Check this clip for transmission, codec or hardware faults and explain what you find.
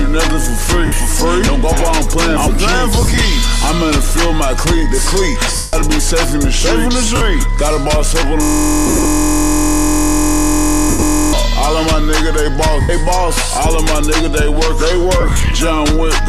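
Two kinds of fault here: repeated dropouts and one long frozen loop.

Lost LE Audio frames hit at 0.86, 3.02, 5.56, 7.16, 8.87, 10.90, 12.81 and 15.21 s. The losses run from 50 to 180 ms, and some are scattered gaps in short bursts. The LC3 decoder papers over the gaps by replaying the last spectrum with random signs, so tones smear into noise and fade.

A system hang loop runs from 8.43 to 11.33 s. A 23.22 ms slice, which fits a 1024-sample buffer, repeats about 125 times while the system is frozen. That comes across as a steady buzz at 43.1 Hz.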